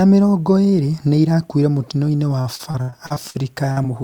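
From 2.41 to 3.36 s the speech suffers repeated packet loss, giving a robotic sound. Audio failed to arrive in time again and again across this stretch, and each gap was patched by extending the preceding sound before the next gap followed. Roughly 290 ms of the span, about 31 percent, is synthesized fill, and the longest single gap is 62 ms. The result is choppy speech with pieces of the signal missing.

Two short concealed packet losses follow, at 3.72 to 3.78 s and 3.82 to 3.86 s. The first replaces about 40 ms of missing audio and the second about 20 ms. In each case the receiver bridged the hole by continuing the last sound, voiced material from its pitch and unvoiced material as shaped noise, then crossfaded back into the real signal. Each is heard as a brief smear or wobble.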